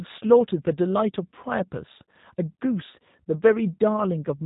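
Throughout, the speech sounds plainly rough and synthetic, dull with nothing above 3.8 kHz. This is G.729 codec damage: each short frame is resynthesised from a filter model, pitch prediction and a few pulses, consistent with G.729A at about 8 kbit/s.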